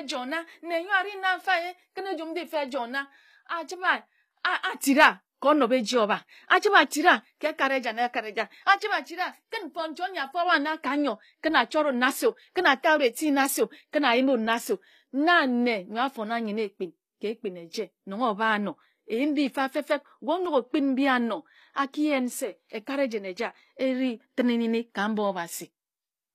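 A speech recording with plainly audible codec damage from start to finish, most likely HE-AAC compression at a low rate that fits something around 24 kbps. The top end still sounds bright, but it's rebuilt rather than real: the encoder keeps the lower spectrum and fills in the treble by copying lower bands upward under a coarse envelope. The harmonics don't line up across that seam, so the s sounds come out gritty and lispy, with a metallic edge.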